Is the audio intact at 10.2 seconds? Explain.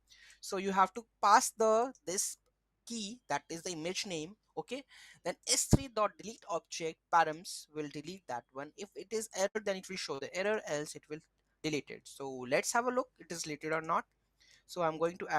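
No. From 10.15 to 10.21 s there is a short concealed packet loss: about 40 ms of audio arrived too late for the decoder, and the receiver filled roughly 36 ms by extending the preceding sound before blending back, heard as a brief smear.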